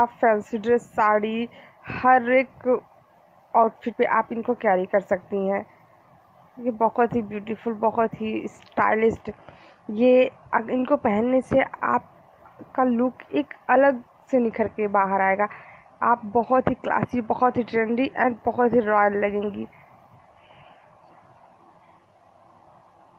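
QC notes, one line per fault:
No fault to note.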